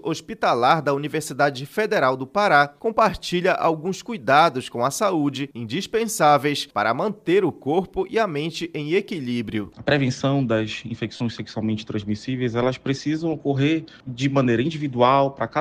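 At 11.16 to 11.20 s, lost LE Audio frames left a 37.5 ms gap; the LC3 decoder refilled it with its last spectrum under random signs, smearing the sound into noise.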